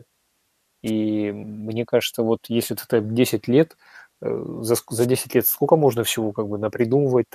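A wireless microphone noise hit occurs twice. The radio link from the analogue FM microphone fades as reflected signals cancel at the receiver, and its noise floor surges through the speech. From 0.86 to 0.91 s, just before "мне кажется вот если", a brief swish of static cuts across the speech. From 4.98 to 5.07 s, right after "за ск", a longer burst of static breaks in.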